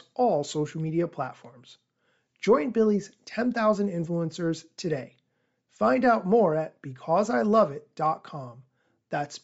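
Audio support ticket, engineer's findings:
Breathy, grainy top end across the whole speech clip, clearly audible. Likely Bluetooth LC3 compression: upper spectrum zeroed and back-filled with noise, which fits a lowish bitrate around 32 kbps in 10 ms frames. Worth checking the LE Audio link settings.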